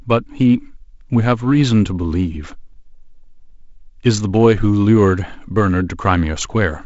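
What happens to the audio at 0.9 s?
Nothing goes wrong at 0.9 s; the speech there is intact, carried through wideband telephone coding that leaves no content above about 7.7 kHz.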